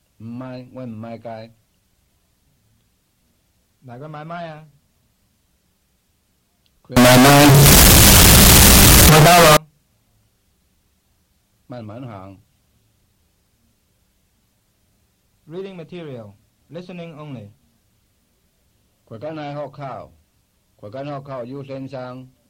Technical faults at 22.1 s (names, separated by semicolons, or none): none